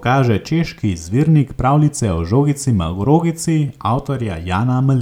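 No dropouts, clicks, distortion or level jumps turn up anywhere in the speech.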